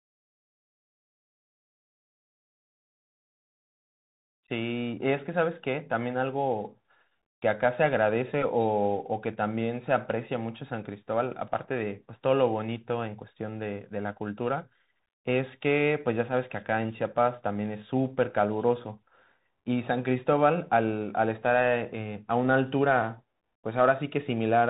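Throughout, the speech sounds narrow and muffled, with nothing above 3.8 kHz, scratchy s sounds, and a granular hiss beneath. This is the Bluetooth CVSD headset codec: its one-bit, adaptive-step coding, consistent with a 64 kbps link, can't track fast, loud high content.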